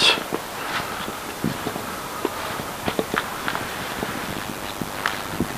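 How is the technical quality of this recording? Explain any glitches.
The recording has one clear glitch, an overlap-add ripple that starts at 4.27 s and runs to the end. The audio was likely cut into windowed frames and rejoined with overlaps that don't sum to a steady gain, so the level dips and swells about 11 dB once per frame, around 100 times a second. It sounds like a metallic buzz. Unlike a mains hum, it adds no steady tone of its own. It modulates the existing sound, which puts extra tones around each note.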